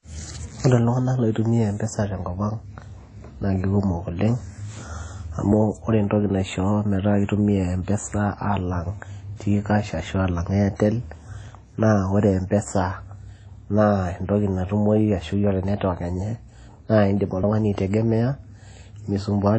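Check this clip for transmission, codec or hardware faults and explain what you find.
Two faults are present: a bandwidth limit that runs through the whole recording, and two brief skips in the second half.

Throughout the clip the speech has nothing above 10.1 kHz, and the top end sounds smeared and thin in a way a high-rate MP3 would not produce by itself. This is likely low-bitrate audio saved at a high bitrate: an earlier low-rate encode, which fits a WMA file at around 32 kbit/s, removed the upper band and left its artefacts. The later MP3 pass, which fits around 256 kbit/s, preserved that damage but could not restore any of it.

At 11.48 s and again at 17.43 s the audio jumps forward, losing a few tens of milliseconds each time. The surrounding material is butted together with no silence, so the speech lurches rather than pausing. The two skips are about 6 seconds apart, which points to audio missing between chunks: a recorder or processor handling 6-second blocks drops a short slice each time it closes one block and opens the next.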